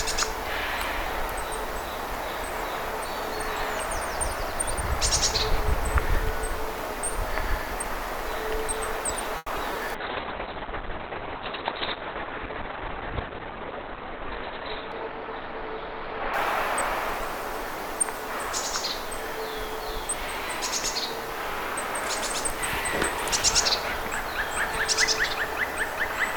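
At 9.37 s there's a short stall from a late packet: the jitter buffer ran dry, so the receiver held the last sound for about 90 ms until the packet turned up. Nothing's lost, but that stretch hangs on with a slight buzz or dip, and the delay grows by 90 ms.

Right after, at 9.56 s and 9.73 s, come two short concealed packet losses. Each time about 20 ms never arrived, and the gap was bridged by extending the preceding sound before blending back. They come across as quick little smears or wobbles, about 30 ms each.

From 9.96 s to 17.90 s there's a call bitrate drop. The bandwidth estimate fell and the encoder went from 48 to 6 kbps, sitting at the bottom for about 3.7 s. Bandwidth shrinks from 20 kHz to 4 kHz, so the sound goes muffled and rough.

Inside that stretch, from 13.12 s to 13.92 s, a jitter buffer speed-up trims the backlog. The receiver snipped out short pitch-period chunks, roughly a tenth of a second in total, so the audio runs at about 112% speed with unchanged pitch and feels hurried.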